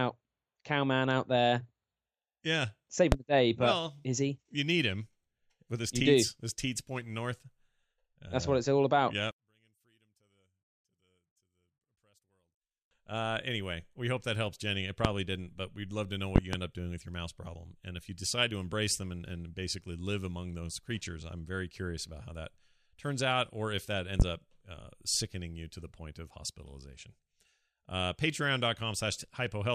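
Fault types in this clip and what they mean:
loud pop: Sharp pops burst well above the speech at 3.12, 15.05 and 24.2 s, with a quick double pop from 16.36 to 16.57 s after "we'd love to know", while the speech runs on underneath. The likely cause is a voltage spike from a plug, switch or static.
one channel inverted: From 9.31 to 12.91 s, heard in mono, the speech nearly vanishes, about 36 dB down, leaving a faint trace. One stereo channel has likely flipped polarity, so the centred voice cancels when the channels are summed.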